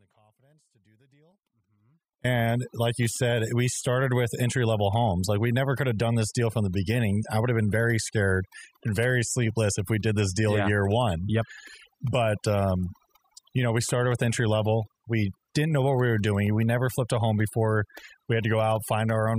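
From the very start until 2.24 s, the speech is already missing, leaving only a faint trace roughly 40 dB below its normal level. This is an audio dropout to a faint residue, likely a lost feed into a still-live path. The abrupt return, rather than a gradual swell, separates it from a fade-in or a natural pause.

Throughout the clip, overdone noise removal has pushed individual frequency bands down whenever they sat near the noise estimate. The background drops and breaks up into twinkling specks. The fluttering, band-by-band artefacts distinguish this from simple low-pass dullness.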